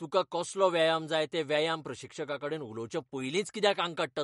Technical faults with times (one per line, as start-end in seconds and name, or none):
0.00-4.23 MP3 compression